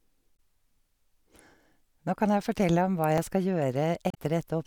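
A speech recording with two instances of damaged data in a compressed stream, at 0.33 to 0.40 s and 4.09 to 4.18 s. Each is a brief glitch where corrupted bytes made the decoder misread frames, lose sync and resume at the next valid frame header. At 3.18 s there is a small skip where a very short slice of audio vanishes and the two sides are butted together without silence. This is likely audio missing between chunks, which fits processing in 2-second chunks, with a fragment dropped at the boundary.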